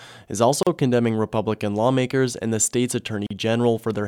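Brief dropouts of about 38 ms at 0.63 s and 39 ms at 3.27 s cut into the speech, a gap at a join of encoded pieces, where untrimmed encoder delay and padding remain.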